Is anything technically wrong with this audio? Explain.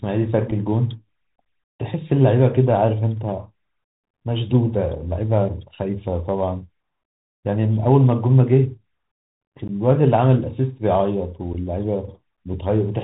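Yes, there are two problems here. The whole clip went through a Bluetooth CVSD headset codec, and the link also dropped a few packets without any concealment.

The CVSD codec damage is plainly audible from start to finish. This codec sends a single up-or-down bit per sample and adapts its step size, which fits a 64 kbit/s headset link. Everything above 4 kHz is gone, so the speech sounds boxed-in. Louder bright parts outrun the step and distort, s sounds come out scratchy, and there's a grainy hiss under the speech.

The unconcealed Bluetooth headset packet loss shows up three times: around 0.51 s, from 9.68 to 9.70 s, and around 11.54 s. The gaps are about 3.8, 15 and 7.5 ms, roughly one packet, a few, and a couple. Nothing patched those gaps, so each one is a short, hard-edged hole in the speech that can click. On this kind of CVSD link, the audio comes back quieter for a moment after each hole.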